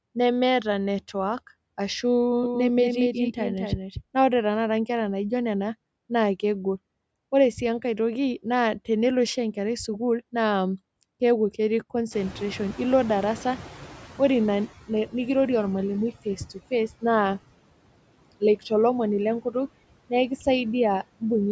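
Speech runs through a processed noise residue for its whole length, with background sinking between phrases: noise suppressor artifacts from a suppressor cutting about 21 dB of noise frame by frame. From 2.44 to 4.02 s, just before "ore tanakata enkera naijio", a full-band echo trails each sound by roughly a fifth of a second, a few dB quieter, with abrupt edges and no room colour. This is a doubled audio track, likely a second out-of-step copy mixed in. When the room noise jumps at around 12 s, the background noise comes through with less reduction from 12.11 to 14.7 s, then fades over about 2.6 s. This is the noise suppressor catching up: its estimate lags, so the reduction starts at only about 10 dB. Brief stretches of speech sound swallowed at 16.25 to 16.72 s (dips of about 13 dB) and 18.4 to 18.71 s (about 17 dB). Each affects roughly a tenth of a second, and both are speech cut by the noise suppressor, which mistook those parts for noise.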